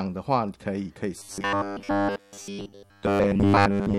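From 1.18 s to the end, the speech turns into a rigid metallic buzz at 100 Hz: robotic sound, likely from repeated short buffers, with 10 ms blocks looping over most of it. A spectrogram shows even 100 Hz harmonic stripes, and the waveform shows identical repeating cycles.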